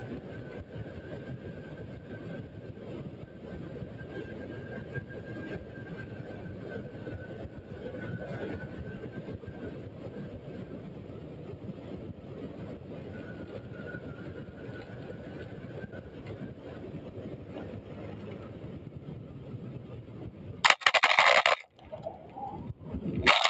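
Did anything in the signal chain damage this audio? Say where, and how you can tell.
Yes. For the whole clip, a noise suppressor applied to music or sounds, in the call processing stage, treats sustained tones and reverb tails as noise. It pulls them down by roughly 5 dB while attacks pass, so the sound pumps and thins. A compressor would dip on loud peaks instead, and there is no content above 8 kHz.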